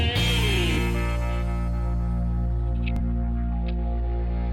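A single Bluetooth packet arrived late or not at all at 0.75 to 0.78 s and again at 2.96 to 3.00 s, so the receiver replayed its last buffer. Each gap is about 21 ms, one lost frame, heard as a brief stutter before the audio jumps ahead.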